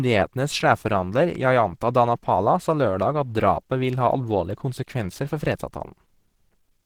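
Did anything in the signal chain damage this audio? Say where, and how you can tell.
Yes. The damage is at the codec stage and spans the whole clip: the speech sounds muffled, hoarse and grainy, though content reaches about 20.3 kHz. This is likely Opus compression in hybrid mode at a rate near 16 kbps, too few bits for fine detail.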